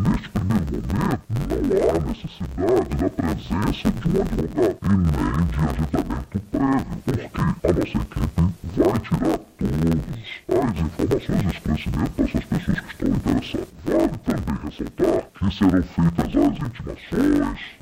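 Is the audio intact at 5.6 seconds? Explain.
No. Interleaved audio read as planar runs throughout: each 10.88 ms block is split into wrong halves, giving a dull, robotic buzz at 91.9 Hz.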